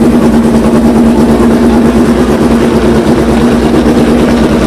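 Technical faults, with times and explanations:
Throughout, hard clipping: the signal is driven about 6 dB beyond what the stage can pass, so around a tenth of the samples are cut flat at the limit. Those squared-off peaks add high harmonics.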